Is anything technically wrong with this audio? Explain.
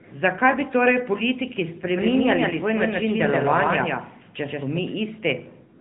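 Yes. Throughout, the speech sounds buzzy and synthetic and stops dead at 3.8 kHz: AMR narrowband mobile codec damage, consistent with a mid-rate mode around 10 kbps. From 1.83 s to 4.79 s, after "bi torej politiki", a dry, equally loud copy trails about 150 ms behind and starts and stops abruptly. This is a doubled audio track, likely from a second, slower capture path.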